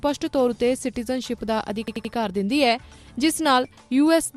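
From 1.88 to 2.13 s comes a repeated buffer: fresh audio arrived late, so the same 85 ms block played three extra times, which fits a 4096-sample buffer. It sounds like a rapid stutter. A spectrogram shows identical tiled blocks separated by sharp vertical seams.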